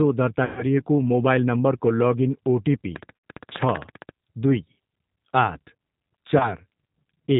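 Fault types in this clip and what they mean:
G.729 codec: The whole clip runs through this 8 kbit/s VoIP codec, which rebuilds speech from a filter, a pitch predictor and a few pulses per frame. You can plainly hear it here: nothing above 4 kHz, and a rough, slightly synthetic edge throughout.
VoIP packet loss concealed by the speech codec: Packets dropped and the decoder guessed from its last pitch and filter, fading the gain. The worst is near 0.45 to 0.65 s, about 120 ms lost. A shorter 80 ms one sits near 3.16 s, and a 20 ms one near 6.38 s.
Train of clicks: From about 2.96 to 4.1 s there's a regular ticking at 15 per second, around twenty clicks, sticking out well above the speech. It's likely interference from nearby gear or a faulty connection or power supply, and it overlaps the 3.16 s dropout.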